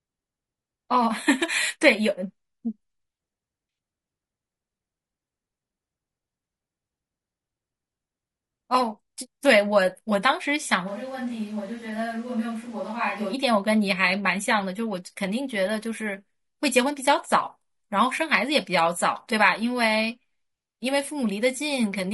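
Low-delay AAC compression runs through the whole speech recording: the voice sounds rough and grainy, with noise filling the gaps between harmonics, most likely from AAC-ELD at around 32 kbps. A switch to a distant microphone occurs from 10.89 to 13.32 s, where the voice turns suddenly roomy, hollow and thinner, drops by about 5 dB, and picks up room noise roughly 25 dB below the speech, likely because the close microphone dropped out and a farther one took over.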